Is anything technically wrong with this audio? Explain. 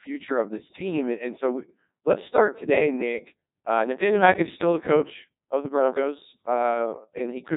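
Yes. The whole clip has passed through a Codec 2 vocoder. The voice is not carried as a waveform. Only pitch, voicing, loudness and a rough spectral shape survive, and the decoder rebuilds the speech from sine waves. The damage is heavy here, which fits a very low rate of about 1.2 kbit/s. Nothing is present above 3.8 kHz. The result sounds robotic and buzzy throughout, with a synthetic tone.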